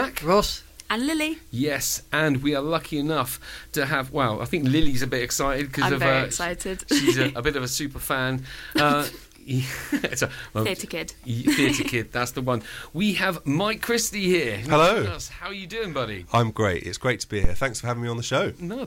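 Two phantom power thumps land at 4.83 s and 17.44 s: supply switching on a live input pushes a DC step through the coupling capacitors, giving a deep thud peaking at about -10 dBFS, then about -6 dBFS. Each shows as a low-frequency waveform swell decaying over roughly 70 ms and 60 ms respectively.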